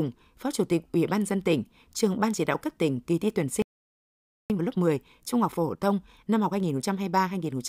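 At 2.13 s, between "ban dân tỉnh" and "ban chỉ đạo cấp", there's a single sharp click. That's a dropped sample, most likely a tiny fraction of a millisecond missing from the stream, so the waveform jumps straight to a later value and snaps.

Right after "tỉnh kỳ thi tuyển" at 3.62 s, the speech just cuts out for about 0.88 s until 4.50 s. That's a playback stall, likely the player running dry or its thread getting blocked, and the speech then picks up where it stopped.

From 4.50 s to 7.50 s you get time-compressed catch-up, with the player trimming its backlog by snipping and cross-fading small chunks. Speech runs about 1.1 times fast at normal pitch. At 6.64 s, inside that stretch, there's another click from a dropped sample, again likely a tiny fraction of a millisecond lost.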